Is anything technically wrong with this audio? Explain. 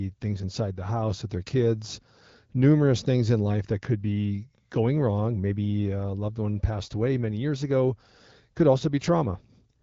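No, nothing is technically wrong with this audio.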